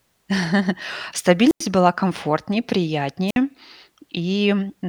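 A speech recording with two wireless microphone squelch dropouts. From 1.47 to 1.63 s the signal thins into hiss before the receiver's squelch mutes it for about 95 ms, and the speech resumes on "была комфортнее". A shorter one runs from 3.27 to 3.37 s with a mute of about 57 ms. Each time, the FM radio link from the transmitter faded below the receiver's threshold and the output was gated to near silence.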